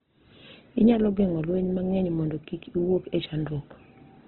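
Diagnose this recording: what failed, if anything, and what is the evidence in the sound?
The codec stage is at fault, likely Opus compression in its CELT mode at a rate consistent with about 12 kbps. Throughout, nothing remains above 4.5 kHz, and the speech sounds heavily grainy and rough, because starved bands are filled with noise instead of real detail.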